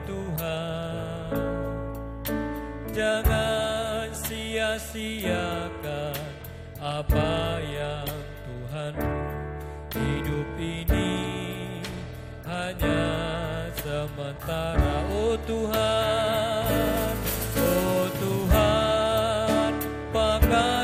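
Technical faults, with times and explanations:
No technical faults can be heard anywhere in the clip. Nothing in the sound needs a time or an explanation.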